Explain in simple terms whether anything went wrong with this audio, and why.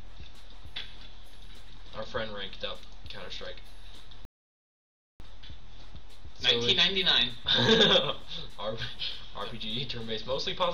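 Yes, something went wrong. At 4.25 seconds the sound stops dead and stays silent until 5.20 seconds. This is a rebuffering stall. The player ran out of downloaded audio and waited for more. Then it picked up exactly where it stopped. Nothing was skipped, but almost a second of silence was added.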